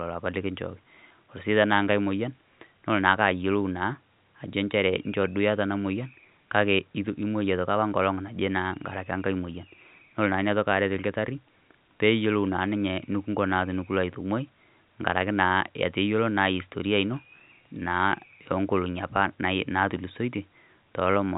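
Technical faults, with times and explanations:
No technical faults heard in this telephone-band speech.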